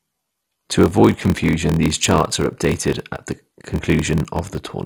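Throughout the speech, the sound is dull and gurgling with granular distortion, likely MP2 compression at a low rate, around 64 kbps. A steady 43.1 Hz buzz runs underneath while the speech plays at 0.938 times normal speed. That is a padded block size mismatch: short blocks are zero-filled to fit what looks like a 1024-sample read.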